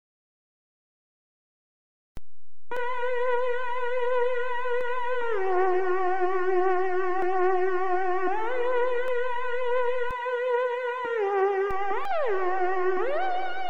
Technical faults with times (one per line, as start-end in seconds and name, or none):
2.17-10.11 DC step
2.77 damaged data in a compressed stream
4.81 damaged data in a compressed stream
7.22 damaged data in a compressed stream
9.08 damaged data in a compressed stream
11.71-13.70 DC step
12.05 damaged data in a compressed stream